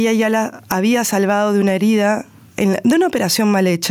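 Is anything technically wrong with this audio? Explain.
Yes, there is gain pumping throughout the speech. The likely cause is input gain set far too high with a fast limiter clamping each loud syllable, so the gain swings by around 10 dB. A waveform looks flattened.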